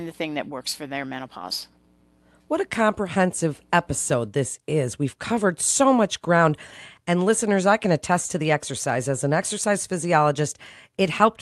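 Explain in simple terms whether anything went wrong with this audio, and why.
Nothing went wrong here.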